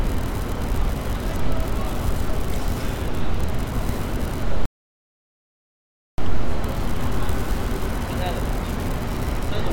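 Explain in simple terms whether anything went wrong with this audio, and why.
At 4.66 seconds the sound suddenly cuts to silence, then picks up again at 6.18 seconds exactly where it left off, with nothing missing. That is a rebuffering stall: the player ran out of downloaded audio and waited about 1.5 seconds for more to arrive.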